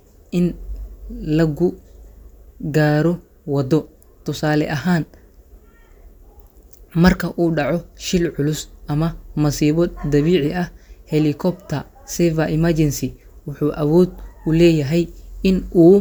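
No technical faults can be heard anywhere in the speech recording, and the signal holds steady throughout with no disturbance to its level, timing or continuity.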